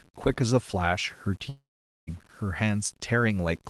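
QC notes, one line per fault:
Throughout: low bit depth without dither. Grainy distortion rides on the sound, roughly 30 dB below it, and disappears in pauses. Unlike steady hiss, it tracks the signal. Quiet tails grow gritty and sputter, most likely from truncation to about an 8-bit word.
1.49 to 2.09 s: long network dropout. The last sound smears into a fading buzz, then about 0.45 s of silence. The audio resumes with roughly 0.58 s missing. That length and the gap, rather than a brief click, point to a likely stall in packet arrival.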